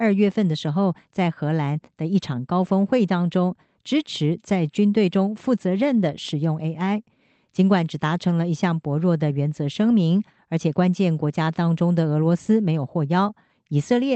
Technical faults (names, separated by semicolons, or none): none